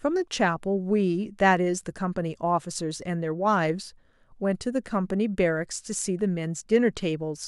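No technical faults can be heard at any point in the recording.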